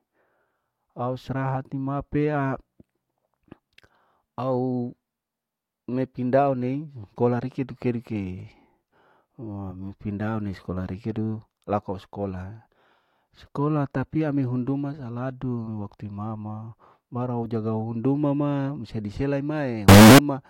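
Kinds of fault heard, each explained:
Signed and unsigned mixed up: From 19.89 to 20.19 s, about 0.3 s near the end of this speech, the sound turns into very loud, harsh distortion, with quieter moments as loud as everything else. The likely cause is 16-bit samples read with the wrong sign convention, which flips the top bit so each zero crossing jumps across the full range. The waveform shows large jumps across its whole range, and the spectrogram shows a dense broadband smear.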